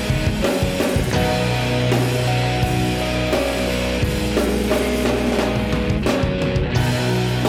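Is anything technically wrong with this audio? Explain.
No, nothing technically wrong stood out on listening to this audio.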